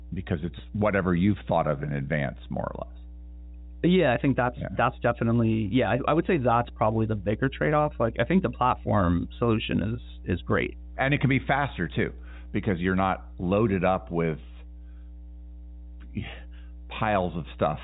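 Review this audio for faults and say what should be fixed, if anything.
Mains hum at 60 Hz, fairly prominent at roughly 15 dB below the speech, runs through the whole recording, from power-line interference getting into the signal path. It is a steady fixed-pitch tone, unlike rumble or wind, which are broadband and fluctuate. The telephone-band limit near 3.8 kHz is normal for the line. Prevent it by breaking ground loops with balanced connections or an isolation transformer, and keeping cables away from power supplies.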